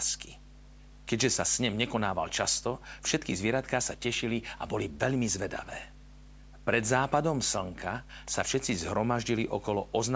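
Right from the start and all the way through, there's a steady mains hum sitting under the speech, a low 50 Hz drone that never lets up. It's strong, only about 10 dB below the speech, so you hear it clearly even while someone is talking. That points to a ground loop or a transformer nearby bleeding the power line into the signal path. The call's microphone processing caps everything around 8 kHz, but the hum sits well below that cut-off.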